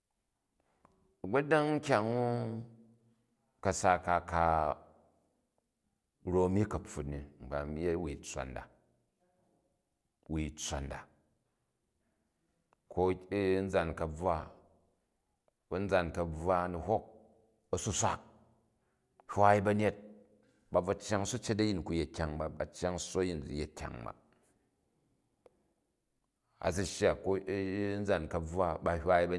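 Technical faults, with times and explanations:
No technical faults can be heard anywhere in the speech recording; the signal stays steady and continuous with nothing added, lost or altered along the way.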